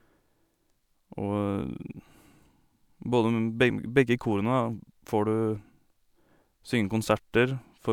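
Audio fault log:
No technical faults are present in the speech signal.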